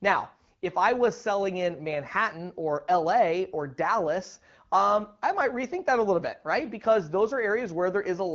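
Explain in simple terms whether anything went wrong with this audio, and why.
Nothing went wrong: this is speech carried over the AMR wideband (HD Voice) phone codec, running at a rate where it keeps speech clear.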